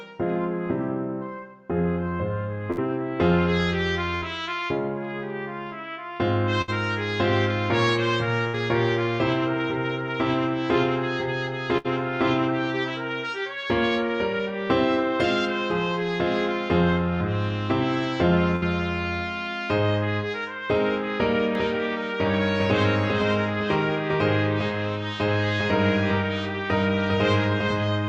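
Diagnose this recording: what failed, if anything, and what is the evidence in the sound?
Network stage: a burst of packet loss at 2.71, 4.16, 6.62, 8.48, 11.78 and 18.56 s. Each time the receiver stretches the last sound for about 60 ms into a fading buzz or hiss, then about 60 ms of audio is skipped. The spectrogram shows frozen, dimming bands ending in a hard step.

From 21.55 s to the end, a doubled audio track: a full-band copy trails roughly 0.4 s behind, about 5 dB quieter. It has no decay or room colour and enters abruptly. The likely cause is a second, slower capture path. The waveform shows every onset repeated, and the spectrogram shows a shifted, fainter duplicate pattern.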